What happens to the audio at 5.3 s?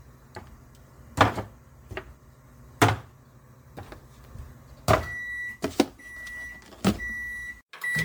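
At 5.3 s the sound carries generation loss, present across the whole clip rather than starting there. It has a swirly, smeared, hollow quality, with transients softened and blurred, and nothing reaches above 19.9 kHz. The likely cause is repeated MP3 coding at 128 kbit/s, around fifteen passes. Each re-encode quantises on a shifted frame grid, so noise and spectral gaps pile up beyond what that bitrate alone would produce.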